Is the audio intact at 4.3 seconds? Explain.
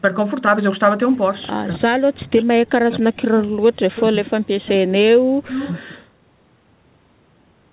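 No. From 4.09 to 4.36 s the speech dips sharply, up to about 35 dB down, and drops out in pieces totalling roughly 150 ms. This is speech suppressed in double talk, likely from an echo canceller turning down the near talker while both sides spoke. It differs from echo leak because the talker's own sound disappears rather than gaining an extra copy.

Inside that window, from 4.26 to 4.31 s, a faint scrap of echo leak is heard. It is a copy of speech delayed by 252 ms, about 20 dB below the speech, likely left over when the canceller failed to remove all the loudspeaker sound. Unlike the suppression, this adds a delayed copy instead of removing the talker.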